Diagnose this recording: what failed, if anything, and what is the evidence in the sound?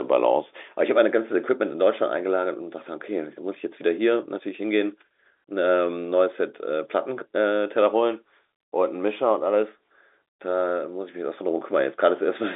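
Nothing failed; the sound shows only the ordinary telephone band with nothing above 3.8 kHz.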